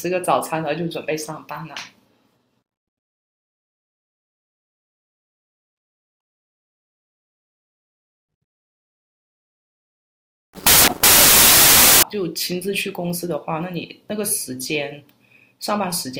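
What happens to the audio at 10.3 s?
A wrong sample width fault runs from 10.26 to 12.03 s. It sounds like 16-bit data read as packed 24-bit samples: each value mixes bytes from neighbouring samples, so loud, harsh noise swamps the speech, which survives only faintly and 1.5 times too fast.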